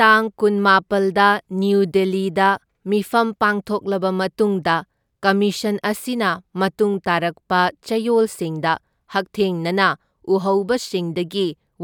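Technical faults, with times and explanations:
No technical faults can be heard anywhere in the signal of this speech recording.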